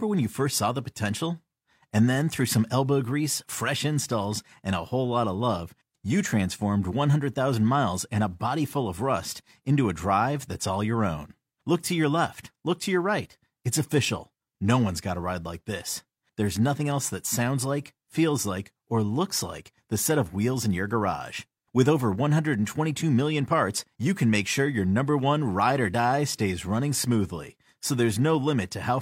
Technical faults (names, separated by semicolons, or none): none